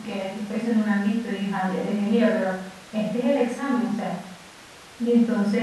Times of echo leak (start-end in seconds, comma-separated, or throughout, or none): none